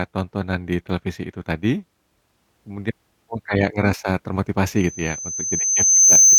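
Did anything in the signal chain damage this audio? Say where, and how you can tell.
Yes: loudspeaker feedback squeal in the analogue speaker-to-microphone loop. A 6.2 kHz tone swells from 4.76 s to about 10 dB over the speech; steady interference wouldn't grow.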